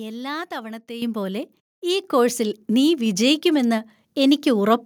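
At 1.02 s the microphone volume steps up by about 9 dB, then again at 2.04 s by about 5 dB. Each time the input gain was raised in one jump, so the speech and the background noise get louder together, instantly rather than with a smooth ramp.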